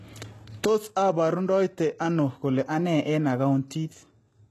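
The damage is likely from HE-AAC compression at a very low bitrate, consistent with roughly 16 kbps. It runs through the whole speech clip. The encoder keeps only the lower spectrum and rebuilds the treble by spectral band replication, copying lower bands upward, so the top end is synthetic rather than the original. The result is plainly audible: sibilants sound gritty and metallic or lispy, and nothing is left above 12.3 kHz.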